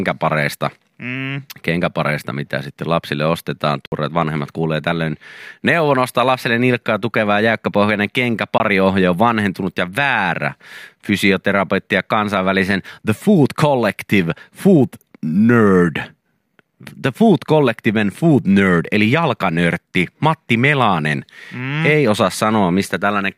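Speech in which the sound twice drops to a block of digital silence: a 60 ms hole from 3.86 to 3.92 s, after "mitä sitten lapsille ostetaan", and a 20 ms one at 8.58 to 8.60 s, after "lapselle nilkkaa tukevaa jäykkäpohjainen". Each cuts to silence and back with no fade. A noise gate or concealment fade would ramp, and this doesn't. The output buffer likely went unfilled in time.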